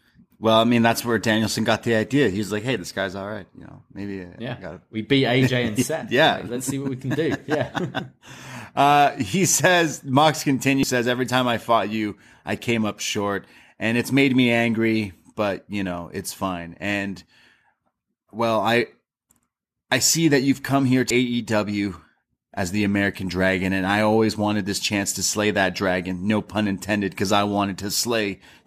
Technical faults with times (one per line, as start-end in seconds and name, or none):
10.83 damaged data in a compressed stream
21.10 damaged data in a compressed stream